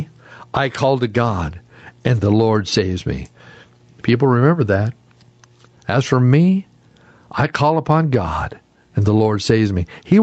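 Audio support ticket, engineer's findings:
Gain pumping, whole clip: loud and soft parts squashed closer in level, level swinging around 15 dB. Likely cause: input gain far too high, fast limiter clamping every peak. Audio top ends near 8 kHz, consistent with the Opus call path.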